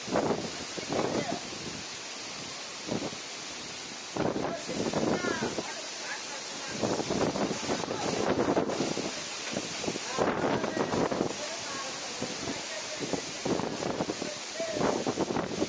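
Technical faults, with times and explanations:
No technical faults can be heard anywhere in this audio.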